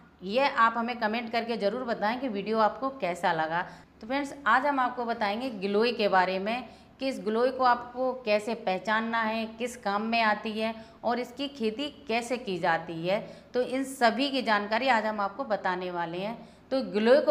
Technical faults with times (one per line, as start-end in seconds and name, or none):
none